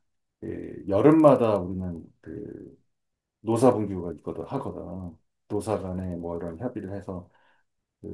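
Throughout the speech, a resampler restarted on every block produces an evenly spaced ticking at 25 Hz, one tick per 40 ms block, as the 48 kHz to 24 kHz conversion treats each block as if nothing lay beyond its edges. Unlike mains hum, the ticking stops in pauses and returns with the speech. Unlike buffer dropouts, no audio goes missing and the spacing never varies.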